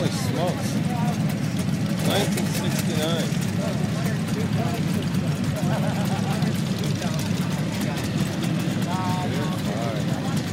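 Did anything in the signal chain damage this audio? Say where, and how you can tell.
No, nothing in the signal chain damaged this audio.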